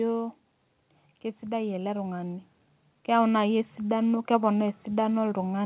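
From 1.46 to 2.51 s the automatic gain control, judging the input too quiet, pushes its gain up by about 5 dB. This automatic gain rising makes the speech and the background swell together across that second, heard through the call path's steady band limit near 4 kHz.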